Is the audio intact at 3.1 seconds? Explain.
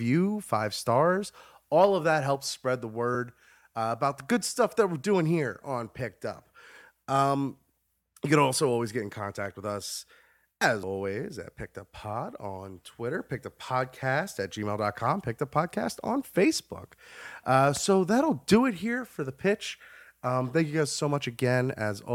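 No, a brief blip breaks the speech at 3.14 s, right after "that helps spread the": damaged data in a compressed stream made the decoder misread that frame and lose sync.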